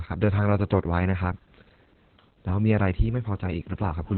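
The speech runs through Opus voice compression for its whole length, with heavy damage: nothing survives above about 4.3 kHz, so it sounds muffled and telephone-like, and the coarsely coded SILK excitation adds hoarseness and a slightly robotic edge, consistent with narrowband coding near 8 kbps.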